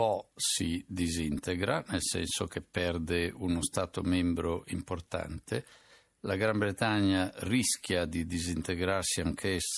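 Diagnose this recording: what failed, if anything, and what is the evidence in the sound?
Nothing failed; no audible fault anywhere in this speech.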